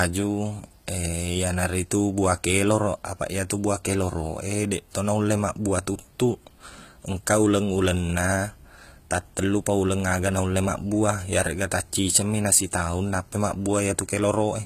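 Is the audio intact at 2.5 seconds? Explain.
No. At 2.5 seconds, as throughout, likely HE-AAC compression at a low bitrate rebuilds the treble from copied lower bands, so s sounds turn gritty and lispy, with nothing above 14.9 kHz.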